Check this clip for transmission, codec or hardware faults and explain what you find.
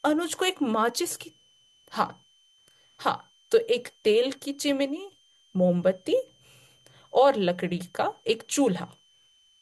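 A hardware fault is present: a switching supply whistle runs through the whole speech recording. A thin, high tone sits between about 3.05 and 3.15 kHz, roughly 40 dB below the speech, drifting slightly in pitch as the power converter's burst-mode frequency shifts with load. It is most noticeable in the pauses. On a spectrogram it appears as a faint horizontal line near 3 kHz that wavers slightly and spans every gap. The waveform barely shows it.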